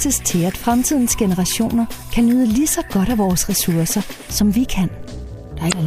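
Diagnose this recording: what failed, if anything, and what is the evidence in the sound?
A short burst of damaged sound breaks through from 5.68 to 5.74 s, lasting about 50 ms just before the end. That points to the codec stage: damaged data in a compressed stream. Bytes in that part of the file or stream were corrupted, so the decoder misread those frames, lost sync, and rendered garbage until it found the next valid frame header and resumed from there.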